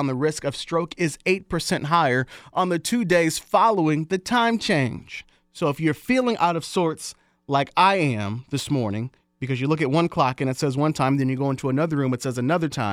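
Speech recording, no technical faults detected.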